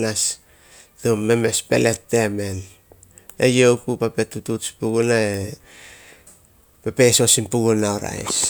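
No technical faults occur anywhere in the speech, so there is nothing to describe in time order.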